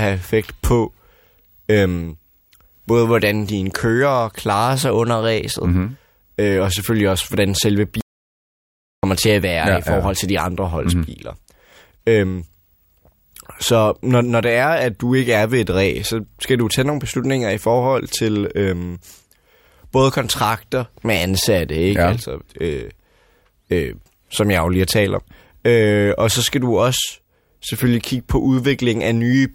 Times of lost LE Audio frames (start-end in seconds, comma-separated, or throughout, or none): none